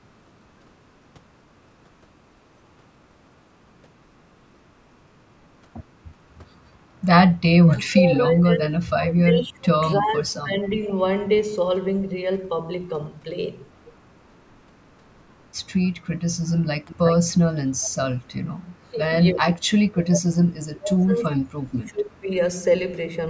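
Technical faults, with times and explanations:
6.38–6.42 s and 7.49–10.82 s, speech suppressed in double talk. A brief dip of about 5 dB comes first. Then the voice sinks by up to about 30 dB for roughly three seconds, thinning and breaking up. This is likely an echo canceller meeting both sides talking at once. It could not separate the near talker from loudspeaker echo, so it turned everything down.
16.85–17.38 s, 17.78–17.95 s and 18.26–18.31 s, echo leak. A copy of the voice returns 342 ms late. It starts at about 10 dB below the speech and fades to about 25 dB, then about 40 dB below. This is likely a loudspeaker's output reaching the microphone and not being fully cancelled, so scraps of it were sent back.
16.86–16.91 s and 18.76–22.31 s, speech suppressed in double talk. A short dip of about 5 dB lands inside the first echo burst. It is followed by a long stretch of roughly three seconds where the voice drops by up to about 30 dB and cuts out in pieces. 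The same cause likely applies. With the echo and the talker overlapping, the canceller damped both together.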